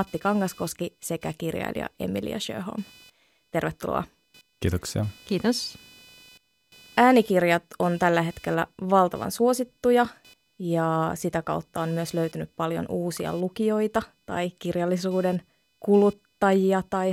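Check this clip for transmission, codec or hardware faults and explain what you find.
One hardware fault runs through the whole clip: computer activity noise. Changing load from the processor, graphics card or mouse shifts the ground shared with the audio circuit. That injects a buzzing, chirping pulse train at around 500 Hz, roughly 35 dB below the speech, which follows the computer's activity rather than the speaking.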